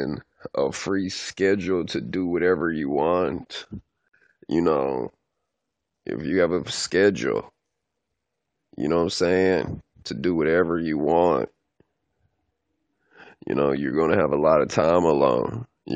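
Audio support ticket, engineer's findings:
Gap at a join of encoded pieces, 4.08–4.14 s: about 52 ms gap between "do whatever you want" and "you know", smeared edges, speech resumes where it stopped. Separately encoded segments concatenated untrimmed; encoder delay and last-frame padding retained.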